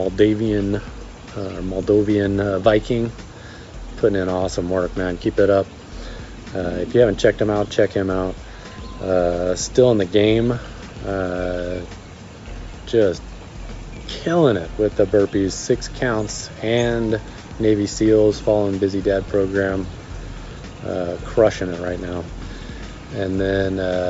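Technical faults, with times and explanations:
No technical faults can be heard anywhere in the audio. Nothing interrupts or degrades the sound at any point.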